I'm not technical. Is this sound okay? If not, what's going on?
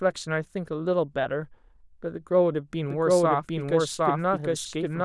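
No. From about 2.9 seconds to the end, there is a doubled audio track. A second copy of the speech plays about 0.7 seconds behind, just as loud, so it sounds like an overlapping echo. Likely a second, slower recording path got mixed in.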